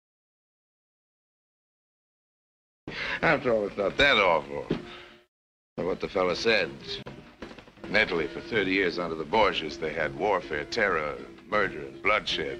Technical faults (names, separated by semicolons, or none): gap at a join of encoded pieces